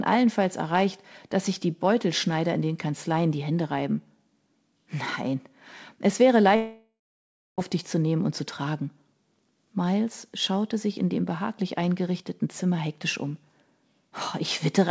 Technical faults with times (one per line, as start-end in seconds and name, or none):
6.56-7.60 long network dropout